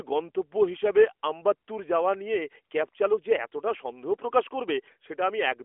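No technical faults can be heard in the speech; it is carried over an AMR narrowband mobile codec path, with the content sitting in the telephone band of roughly 300 Hz to 3.4 kHz, nothing above about 3.8 kHz, and only light coding texture, which fits the codec's highest 12.2 kbps mode.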